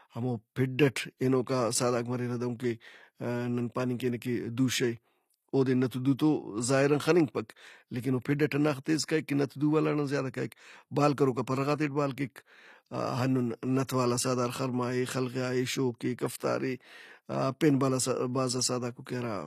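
All the way through, the speech has that gritty, metallic treble you get from HE-AAC compression. It's likely a low-rate stream, something around 24 kbps, with the top end rebuilt from copied lower bands rather than coded. Sibilants sound lispy, and nothing at all comes through above 14.9 kHz.

At 13.87 s there's pre-echo just before "والا سہدار خرما". A hiss leaks about 13 ms ahead of the attack, because the codec spread the noise from the loud onset back across its block. That leaves the start of the sound smeared.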